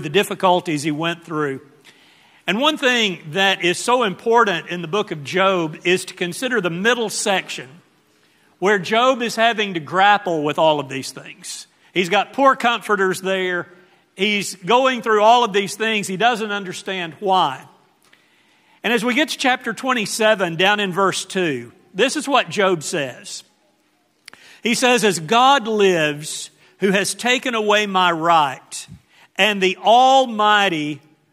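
Nothing in this audio stands out as a technical fault; it just runs along steadily the whole way, with no dropouts, glitches or other trouble to point to.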